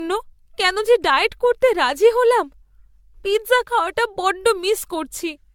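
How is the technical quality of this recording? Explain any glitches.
The recording is degraded for its whole length by one fault, generation loss. Throughout, the speech sounds swirly, smeared and hollow, with blurred consonant attacks. It is likely caused by around seven rounds of AAC-LC encoding, at a quality that fits 96 kbit/s. Each pass requantises on a shifted frame grid, so noise and holes accumulate. A spectrogram would show nothing above 17 kHz, patchy gaps between harmonics and smeared onsets.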